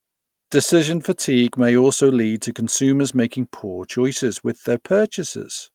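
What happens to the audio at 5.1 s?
Nothing goes wrong at 5.1 s; the speech runs through that moment intact, with no dropout, click or other fault.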